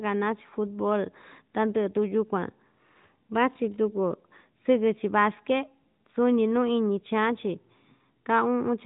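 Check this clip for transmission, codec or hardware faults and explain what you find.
No transmission, codec or hardware faults can be heard in this speech. It comes through the AMR narrowband mobile codec, with nothing above 4 kHz and only light coding character, which fits the 12.2 kbps mode.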